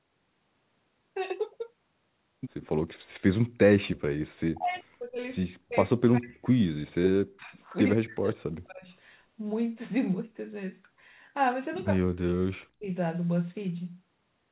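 Speech, band-limited to about 4 kHz in a way that fits a G.711 mu-law call path, shows speech suppressed in double talk four times: 4.52 to 5.27 s, 5.56 to 7.61 s, 7.96 to 8.87 s and 11.92 to 12.87 s. In each, the level dips or cuts out in pieces by as much as about 40 dB. This is likely the echo canceller attenuating the near talker while the far side speaks. A brief echo leak at 4.75 to 4.8 s adds a very faint copy, roughly 40 dB below the speech, delayed by 141 ms. This is likely residual loudspeaker echo that the canceller failed to remove.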